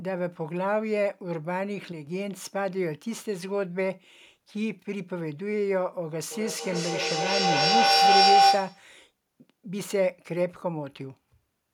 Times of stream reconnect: none

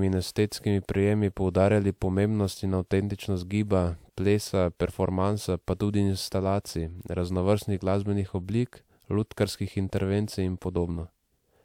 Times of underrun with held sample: none

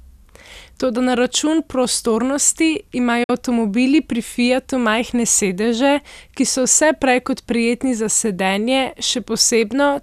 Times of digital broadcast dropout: 3.23-3.30

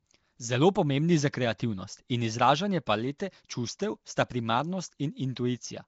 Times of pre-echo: 1.58, 3.18

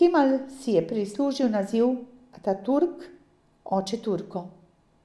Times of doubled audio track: none

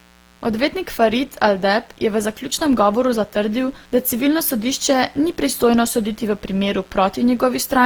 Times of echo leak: none

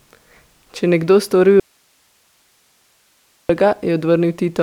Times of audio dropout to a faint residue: 1.60-3.49

